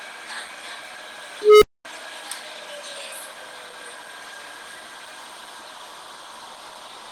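Low-bitrate Opus compression is the likely cause of the plainly audible grainy, rough texture throughout, fitting roughly 16 kbps in hybrid mode, which turns the sound noisy and hoarse. From 1.42 to 1.85 s, an unstable filter's output runs away: a tone around 400 Hz swells over about 0.2 s to a loud squeal, then cuts to silence for about 0.23 s.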